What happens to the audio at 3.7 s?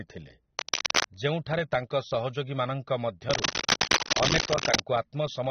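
Right there you're in a burst of cable scratch noise, 3.31 to 4.81 s, a bit louder than the speech: dense rustly crackle, likely from a worn lead or connector being moved. Underneath, the whole clip has AAC compression damage, dull, smeared and nothing above 6.3 kHz, likely from a low bitrate around 24 kbps.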